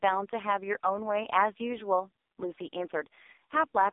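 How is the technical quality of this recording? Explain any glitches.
Poor: the whole clip of speech carries heavy damage from the AMR narrowband mobile codec, with no clean stretch anywhere. Only the band from 300 Hz to 3.7 kHz survives, so the voice is thin and boxed-in, and its buzzy, synthetic edge fits the codec's lowest 4.75 kbps mode. AMR-NB rebuilds speech from a vocal-tract model fed by a few pulses per subframe. At that bitrate the model is coarse. On a spectrogram the energy stops at a flat ceiling near 3.7 kHz, with an empty strip below 300 Hz.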